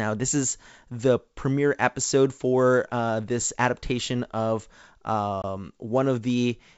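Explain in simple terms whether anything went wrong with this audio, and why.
A brief hole of silence at 5.42 to 5.45 s, then the sound returns slightly distorted: packet loss on an ADPCM call, with roughly one packet dropped and the decoder briefly out of step.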